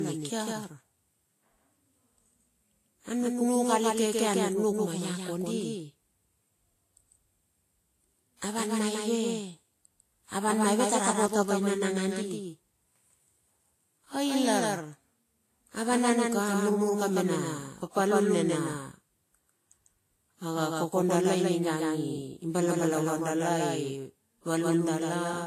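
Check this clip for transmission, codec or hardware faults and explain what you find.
Two faults run through the whole speech recording.

Doubled audio track, throughout: a second capture path or an edit has likely mixed the same audio in again, trailing by a fixed delay of about 150 ms and about 5 dB quieter. Every syllable gets a clean, full-band repeat with no decay or room colour.

Transcoding between lossy codecs, throughout: the audio was likely encoded by one lossy codec and then re-encoded by another, consistent with a low-rate Vorbis stage followed by WMA. Nothing remains above 14.2 kHz, and two distinct sets of compression artefacts overlap.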